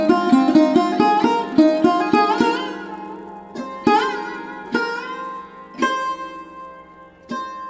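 Throughout, a resampler restarted on every block converts 24 kHz to 16 kHz in 10 ms pieces. Each edge errs, giving a 100 Hz buzz under the sound.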